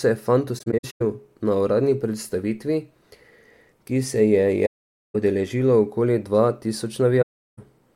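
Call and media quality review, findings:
AAC frame loss with muting, 0.58–1.02 s after "se je fant", before "na uradni predstavitvi" (scattered gaps, about 0.26 s lost, longest about 0.1 s); 4.66–5.15 s; 7.22–7.59 s. Decoder zeroes the lost frames' spectrum, so the windows fade out and back in. Soft-edged silences with no repeated or smeared sound, unlike hard dropouts or concealment.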